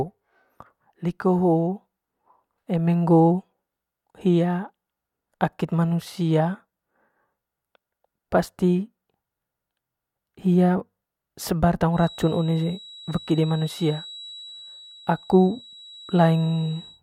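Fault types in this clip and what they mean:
Feedback whistle: From just after "hia sebar" at about 11.89 s until the clip ends at 17.03 s, a thin, steady tone near 3.9 kHz sits behind the speech, well below it in level, slowly swelling and fading in loudness. This is likely a loudspeaker-to-microphone loop held right at its feedback threshold, so a single high frequency keeps ringing without building into a runaway howl.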